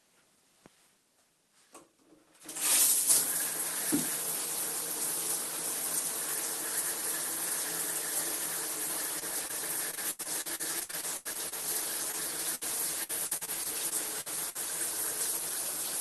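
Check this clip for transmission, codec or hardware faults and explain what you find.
The clip shows three kinds of transmission fault, all from packet loss on a call link. The sound is carried by a call codec whose top end stops near 12 kHz, consistent with Opus at around 24 kbps.

Short concealed packet loss occurs at 9.19–9.23 s, 9.47–9.51 s and 12.12–12.15 s. Each time, about 20 ms of audio failed to arrive before playout. The decoder bridged the hole by extending the preceding sound, keeping its pitch if it was tonal or substituting shaped noise if not, then cross-faded back into the received signal. Each event is heard as a brief smear or wobble.

Repeated packet loss (robotic sound) covers 9.91–11.54 s and 13.03–14.57 s. The first stretch has 13 separate gaps, the longest 83 ms, with roughly 460 ms missing, so about 29 percent of that span is synthesised. The second has 8 gaps, the longest 56 ms, with about 300 ms missing, or 19 percent. 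Because each patch extrapolates from the last good audio and another dropout arrives shortly after, the sound turns choppy, with fragments cut out.

A burst of packet loss hits at 12.55–12.63 s, where about 60 ms in a row went missing. Concealment held the previous sound and attenuated it as the gap lengthened, giving a sustained buzz or fading hiss. Playback then picks up later in the stream, so the audio between those points is absent rather than delayed.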